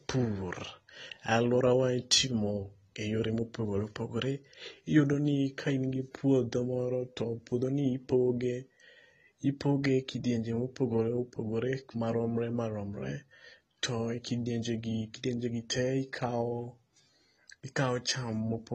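Speech runs the whole way through with AAC compression damage that's plainly audible. Nothing reaches above 14.1 kHz, so the top end sounds dulled, and sibilants and held sounds pick up a smeared, warbly, fizzy texture. That's what happens when a codec like AAC-LC is starved of bits and has to coarsely quantise its frequency lines. The amount of damage fits a low bitrate around 32 kbps, so an AAC-LC encode is the likely cause.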